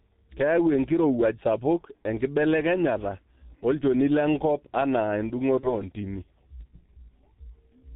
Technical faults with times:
0.00-7.95 G.723.1 codec
5.60-5.82 VoIP packet loss concealed by the speech codec

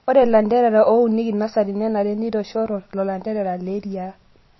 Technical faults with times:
0.00-4.59 MP3 compression

